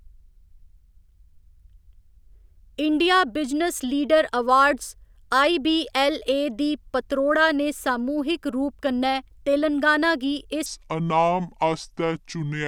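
From 10.66 s to the end, a section at the wrong speed, likely from a clock mismatch, plays at 0.65 times normal speed, dropping the speech about seven semitones lower and slower.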